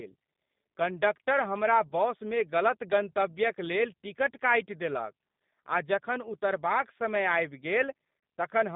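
Throughout, the speech has passed through the G.729 codec, which rebuilds it from a vocal tract filter, a pitch predictor and sparse pulses at a rate that fits 8 kbit/s. The line passes only about 150 Hz to 3.7 kHz, and the voice sounds plainly rough and synthetic.

From 8.19 to 8.23 s, VoIP packet loss concealed by the speech codec removes 40 ms, which fits two lost packets. The decoder extends its last pitch and filter at falling gain, so the sound briefly turns into a fading buzzy tone or coloured noise, and the voice stays weakened just after.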